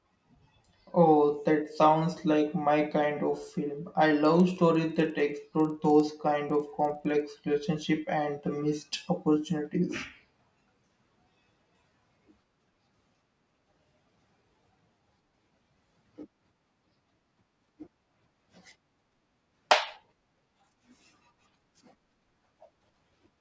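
A speech clip with a resampler restarted on every block between 4.25 and 7.4 s, from after "kind of film I" to just before "relationship and the missed". Each 50 ms block was converted in isolation, so the filter lacked true neighbouring samples at every block edge and left a small error there. The result is a steady 20 Hz ticking, close to a buzz, riding on the speech, consistent with a downsample from 44.1 kHz to 16 kHz.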